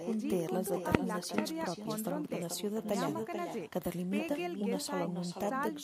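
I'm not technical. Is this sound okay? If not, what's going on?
No. There's echo with no canceller throughout. Every phrase returns a little under half a second later as a fainter, hollow copy from the far end's loudspeaker.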